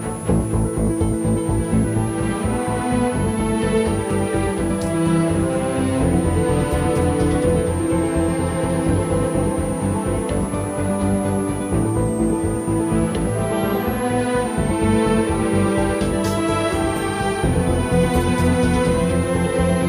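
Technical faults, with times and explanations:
Throughout, switching supply whistle: a thin, high whistle sits under the sound for the whole clip, wandering between about 8.4 and 11.5 kHz and hovering near 10 kHz, roughly 20 dB below the programme. That's a switching power supply dropping into an audible burst mode or beating with another supply, so its pitch shifts as the load it's feeding changes.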